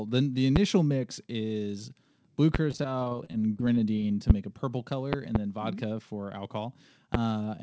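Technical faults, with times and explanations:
0.56–0.59 s, 2.55–2.58 s (just after "mix is blue"), 4.30–4.33 s, 5.13–5.38 s (two pops, just after "a purple") and 7.14–7.17 s: loud pop. Each is a sharp pop about 20 dB above the speech, which carries on underneath. A sudden voltage step is likely the cause, from a plug, switch or static. It enters the signal, and the following circuits shape it into this pop.
2.71–4.10 s, after "mix is blue": repeated packet loss (robotic sound). About fifteen short holes appear, none longer than 20 ms, totalling about 180 ms. Each hole is filled by continuing the previous sound. The next hole follows soon after, so the speech turns choppy, with small pieces missing.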